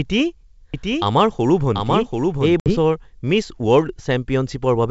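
From 0.74 s to 2.90 s a doubled audio track runs under the speech: a second full-band copy, about 5 dB quieter, trails the original by roughly 0.7 s with no reverberant tail or room colour. It switches on and off abruptly, most likely from a second, slower capture path mixed back in. On a spectrogram the harmonic and formant patterns repeat, shifted right by that gap, and the waveform shows a step in density at each edge.

Between 2.60 s and 2.75 s comes packet loss on an ADPCM call. A 60 ms stretch, pointing to a few packets, drops to hard-edged silence, a clean vertical gap on the spectrogram and a flat line in the waveform. When the sound resumes, the decoder's predictor and step size no longer match the sender's, so it comes back with brief, slight distortion before settling. This is audible against the otherwise clear G.722 wideband band, which extends up to about 7 kHz.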